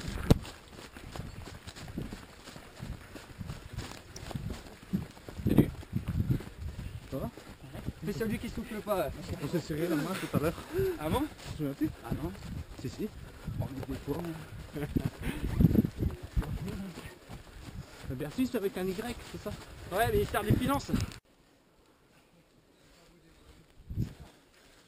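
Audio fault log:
4.16 s, electrical switching spike: a sharp snap, only a few milliseconds long, sits on top of the sound. It peaks at around -30 dBFS. It is likely an arc from a nearby switch or static discharge coupling into the line.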